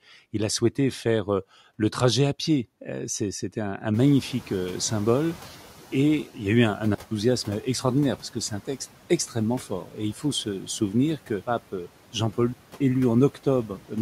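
At 3.93 s, just after "à pied c'était un", the room noise jumps by about 23 dB. The noise suppressor is catching up. Its noise estimate lags the sudden rise. So the noise comes through with less reduction at first. It then sinks by about 9 dB as the estimate adapts, settling by 6.3 s, before "il y a eu".

From 6.95 to 7.11 s, after "y a eu un", there is a digital wireless dropout. The link lost too much data, and the receiver muted for 164 ms. It sounds like a clean hole of near silence. No noise burst surrounds it. A second, 278 ms dropout follows at 12.53 to 12.81 s.

From 9.69 to 9.98 s, after "c'est un texte extrêmement", the speech is cut by the noise suppressor. It mistook part of the speech for noise. Around 150 ms is turned down, by up to about 10 dB. That stretch sounds swallowed and faint.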